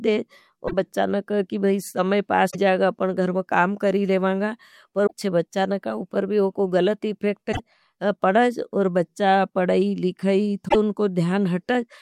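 Five short glitches break up this speech recording, each roughly a tenth of a second long: 0.64 to 0.74 s just before "नहीं कहा कि समय", 2.47 to 2.55 s before "जाएगा अपना घरम काम", 5.03 to 5.13 s, 7.49 to 7.60 s after "भी उनको गलत इफेक्ट", and 10.65 to 10.76 s. They are damaged data in a compressed stream: corrupted bytes make the decoder misread frames and lose sync until it finds the next valid frame header.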